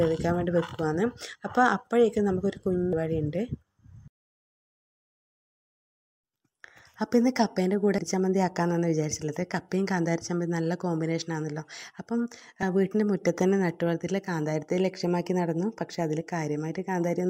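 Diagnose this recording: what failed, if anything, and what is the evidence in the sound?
Damaged data in the compressed stream at the codec stage: brief glitches at 2.93 s and 7.98 s, and a longer one from 12.59 to 12.63 s. Corrupted frames desync the decoder, appearing as broadband vertical smears on the spectrogram.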